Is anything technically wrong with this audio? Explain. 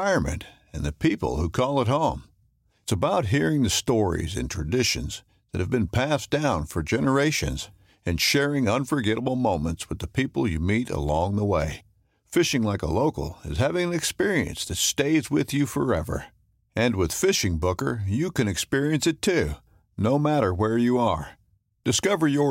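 No, no technical problem can be heard in this speech recording. Nothing in it calls for correction.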